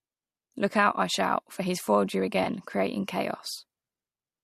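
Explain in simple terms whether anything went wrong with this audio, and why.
Yes, one brief glitch. At about 2.44 to 2.47 seconds, the speech turns smeared and noisy for an instant. This is AAC frame loss with concealment. A tiny piece of the compressed audio, about 20 milliseconds, went missing, which fits two lost frames. The decoder could not play what was lost. Instead it guessed, filling the hole by reusing the sound just before it. That guess is close but not exact, so the patch sounds blurred. The speech was likely carried by low-delay AAC compression, the kind used in video calls.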